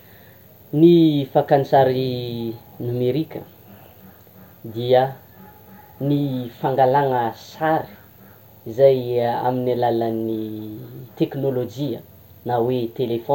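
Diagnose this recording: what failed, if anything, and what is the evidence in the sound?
Listening to the speech in this recording, nothing stood out as a failure at any stage of the chain.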